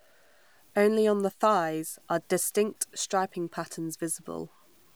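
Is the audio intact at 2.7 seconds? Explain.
No. At 2.7 seconds, as across the whole clip, the speech has low bit depth without dither. Grainy distortion tracks the signal and grows rougher in quiet parts, sitting roughly 40 dB down. The likely cause is truncation, fitting a 9-bit signal.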